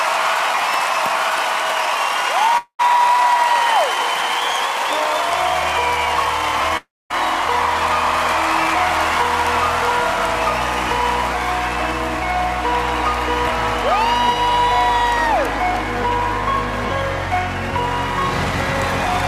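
At 2.57 to 2.81 s and again at 6.77 to 7.12 s, there's what's likely a long network dropout: a fading buzz or hiss fills in briefly, then silence, and the sound resumes with roughly a fifth and a third of a second lost.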